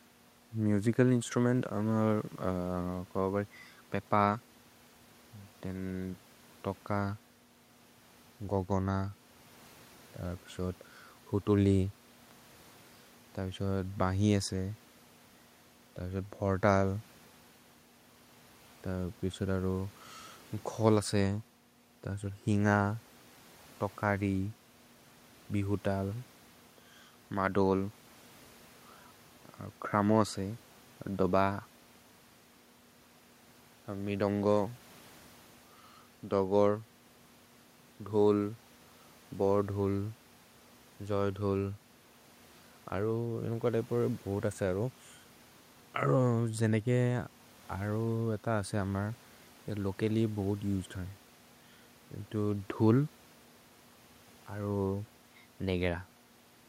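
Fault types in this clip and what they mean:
Nothing stood out on listening to the speech; the faint room noise sits about 32 dB below it.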